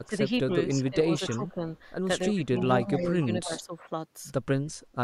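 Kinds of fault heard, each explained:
Speech suppressed in double talk: the voice dips in four stretches, 0.04 to 0.32 s, 0.68 to 0.99 s, 1.29 to 1.65 s and a long one from 2.27 to 3.92 s, dropping by up to about 20 dB at the start. That's likely an echo canceller ducking everything while both sides talked at once.
Echo leak: faint delayed copies of the voice sneak back at 0.86, 1.27 to 1.35 and 2.97 to 3.06 s, trailing the original by 283 ms and sitting about 20 to 25 dB down. That's likely a loudspeaker echo the far end's canceller didn't fully remove.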